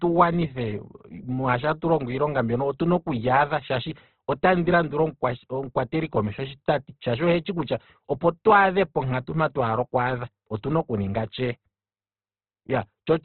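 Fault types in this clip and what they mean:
Opus compression: The speech stops sharply at 4.2 kHz and sounds grainy and rough throughout. Starved bands are filled with folded or noisy content rather than left as holes. This is likely heavy Opus encoding, which fits a bitrate around 12 kbps.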